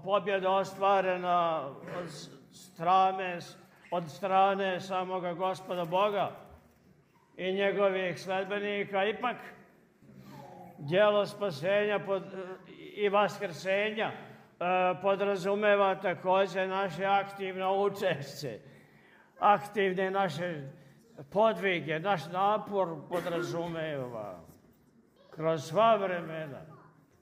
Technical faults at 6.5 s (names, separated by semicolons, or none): none